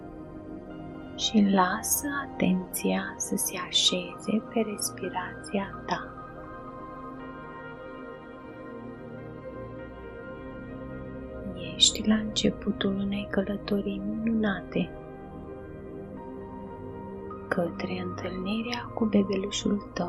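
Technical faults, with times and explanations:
Throughout: MP2 compression, plainly audible. The sound is dull and carries a gurgling, granular roughness, which likely comes from MPEG Layer II coding at a low rate, consistent with about 80 kbps. Starved of bits, the encoder shuts off upper sub-bands and coarsely quantises the rest. On a spectrogram the high frequencies show a ragged ceiling, with blocky bands that blink on and off from frame to frame, and the remaining energy looks patchy and grainy.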